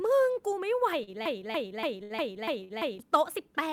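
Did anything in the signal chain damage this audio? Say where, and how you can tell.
Yes. Three brief holds occur at 1.03, 2.03 and 2.64 s. Each stretches the current speech sound for about 39, 68 and 53 ms with a slight buzz or dip, then resumes with nothing skipped. These are short stalls from a late packet at the network stage: the jitter buffer ran dry and the receiver padded the gap until the packet arrived.

From 1.26 to 2.99 s, a 288 ms fragment plays six times back to back, like a broken-record loop, and the speech that belonged in that stretch is gone. The likely cause is a stalled player, encoder or stream at the playback stage that kept resending its last buffered piece.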